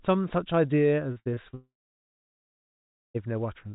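From 1.12 to 1.55 s, repeated packet loss (robotic sound) produces five short gaps, the longest 58 ms, patched by repeating sound. About a third of that span turns choppy, unlike a single clean break. From 1.55 to 3.16 s, one long network dropout is the likely cause: a buzz or hiss fades into roughly 1.4 s of silence, and the speech returns with that part missing. Throughout, the narrowband G.711 call path leaves nothing above 4 kHz.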